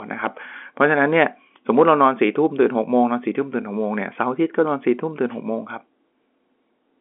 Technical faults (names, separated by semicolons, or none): none